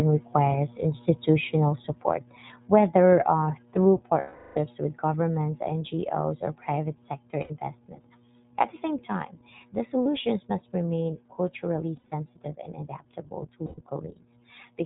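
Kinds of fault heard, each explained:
iLBC codec: a narrowband codec codes each 20 ms frame independently at 15.2 kbps, so nothing above 4 kHz survives and speech sounds plainly rough and synthetic.
lost iLBC frames: dropped packets made the decoder repeat the last pitch cycle with noise, giving held buzzy vowels, longest 360 ms near 4.2 s.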